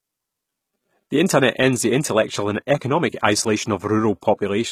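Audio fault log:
Throughout: HE-AAC compression, plainly audible across the whole speech clip. The upper spectrum has a bright but synthetic quality, and s sounds come out gritty and metallic or lispy rather than clean. This is likely the result of spectral band replication: only the lower bands carry real coded detail, and the treble is rebuilt by copying those bands upward under a coarse envelope, so its harmonics fail to line up. The damage level fits a bitrate around 20 kbps.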